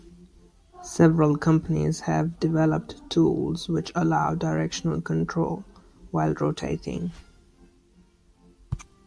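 No technical faults can be heard anywhere in the recording.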